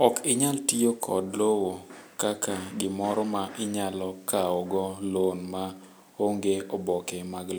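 Nothing in this speech recording stands out as a technical fault at any point.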